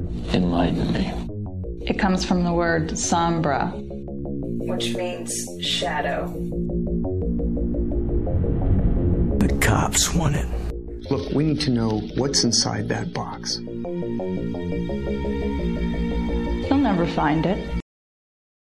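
At 17.80 s the audio hits a cut-off end: the final buffers were never written or played, so the sound stops mid-event and drops straight to digital silence until the end. Unlike a natural ending or fade, nothing decays away; the signal simply vanishes.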